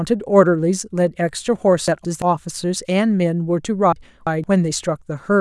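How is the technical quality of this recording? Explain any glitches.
The recording has two jumbled moments caused by chunks out of order. From 1.88 to 2.22 s, one 171 ms chunk plays one slot late. From 3.93 to 4.44 s, one plays two slots late. Nothing is lost, but the sound scrambles briefly at hard joins.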